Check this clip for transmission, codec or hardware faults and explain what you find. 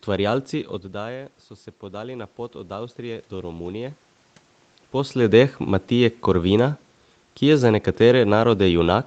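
One fault stands out: automatic gain rising, from 0.93 s to 4.04 s. Shortly before, around half a second in, the talker moves away and the level reaching the microphone falls by about 13 dB. The gain control responds by raising its gain gradually, about 6 dB over roughly three seconds. Because it amplifies everything it receives, the voice and the room noise swell together, a slow creeping loudness rather than a clean recovery.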